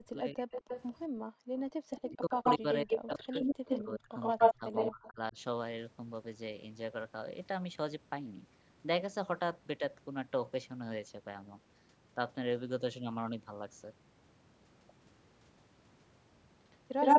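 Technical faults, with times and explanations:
0.00–0.48 s and 1.51–5.37 s, speech suppressed in double talk: the voice dips by up to around 35 dB, over roughly half a second in the first span and about two seconds in total in the second. This is likely because an echo canceller treated overlapping talk as echo and turned it down. On a waveform the envelope collapses in patches.
0.51–0.92 s, 2.07–2.58 s, 2.90–5.08 s and 16.71–17.19 s, echo leak: a delayed copy of the voice comes back, likely because a loudspeaker-side canceller let it through. The delay is 224 ms in the first span, where the copy sits about 5 dB under the speech. In the later spans the delay is 113 ms and the copy is louder than the speech, by about 10, 5 and 15 dB. A spectrogram shows the same harmonic patterns repeated slightly later, often broken up.
1.09–1.23 s, background gated by the echo canceller: the room sound drops by about 40 dB for roughly 150 ms and then returns as the canceller releases the microphone. 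On a waveform the noise floor falls abruptly to near silence. On a spectrogram a short, dark vertical gap runs across all frequencies.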